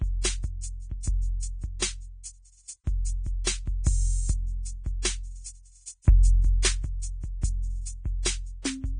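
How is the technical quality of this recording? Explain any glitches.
Quality is poor: heavy lossy coding runs through the whole piece of music, and there's one audible pre-echo near the end.

Throughout, the treble is gone above 9.7 kHz, and what's left up top sounds hissy and grainy, with roughened tones. That's likely Vorbis compression pushed hard. It's the sort of damage you'd expect from a bitrate somewhere near 18 kbps, where fine detail gets quantised into noise.

At about 6.62 to 6.65 s there's pre-echo: a brief hiss of about 25 ms ahead of an attack, which also sounds softened. The codec spreads its coding noise across a whole block, so noise sized for the loud hit leaks into the quiet moment just before it.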